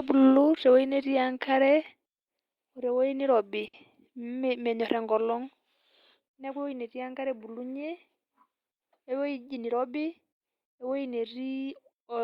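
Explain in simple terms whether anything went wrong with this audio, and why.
Two hiccups stand out. Around 3.67 to 3.76 s there's a short stall from a late packet: a sound gets held about 60 ms too long while playback waits, but nothing is lost. Then from 9.65 to 10.06 s there's a jitter buffer speed-up, where the speech runs about 14% faster at the same pitch because the player trimmed roughly 70 ms to catch up.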